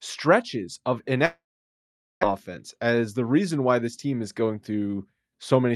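Just after "stretches of", from 1.25 to 2.25 s, the speech drops out: the last sound smears into a brief fading buzz, then about 0.8 s of silence follows before the talker resumes with roughly 0.9 s of speech missing and the timing shifted slightly. This is a long network dropout, likely a run of lost packets the receiver could only paper over. On a waveform it shows as a tapering tail into a flat line; on a spectrogram, smeared harmonics fading into an empty band.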